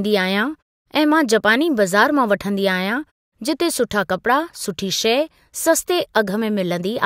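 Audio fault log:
The speech signal keeps continuity throughout, with pauses dropping to silence and the sound returning in time for each following phrase.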